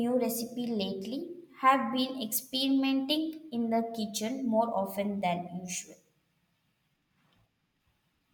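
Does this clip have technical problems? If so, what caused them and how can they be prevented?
No, there are no technical problems in this clip.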